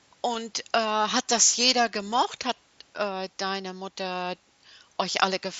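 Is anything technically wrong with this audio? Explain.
Yes. At 0.34 s there is a concealed Bluetooth headset packet loss: a gap of about 7.5 ms, consistent with one lost packet, filled by repeating the best-matching recent waveform, leaving only a barely audible blip.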